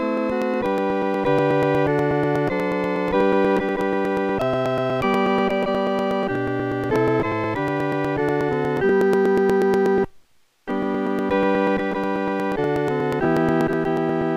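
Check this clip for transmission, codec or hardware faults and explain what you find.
There is one fault: periodic USB or driver dropouts run from 0.18 s to 14.2 s. Every 0.121 s, the bus or driver stalls and a few milliseconds of audio are skipped, giving evenly spaced ticks under the signal. This clockwork regularity separates it from random network packet loss.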